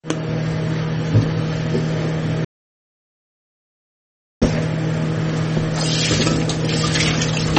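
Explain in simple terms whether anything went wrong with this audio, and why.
From 2.45 to 4.42 s the audio drops out to total silence for about two seconds. That's an audio dropout to silence, likely from the input being lost while recording continued.

Throughout, the sound is dull and watery, with nothing above 8.4 kHz. That's MP3 compression damage, likely from squeezing the file too hard.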